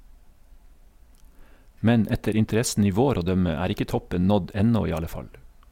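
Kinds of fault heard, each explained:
No kinds of fault are heard in this speech.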